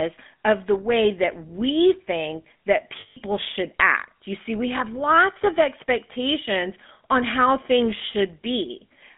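Throughout the speech there is a buzzy, gravelly roughness over a band confined to about 200 Hz to 3.5 kHz. This is the GSM full-rate codec: the vocal tract is modelled and driven by sparse, regularly spaced pulses, consistent with a 13 kbit/s coder, and the damage is plainly audible.

From 3.0 to 3.17 s, between "that we think that" and "should act", the sound hangs on a rough, metallic ring. These are lost GSM frames: for 160 ms the decoder kept replaying the last good frame's settings, which fits about eight missing frames.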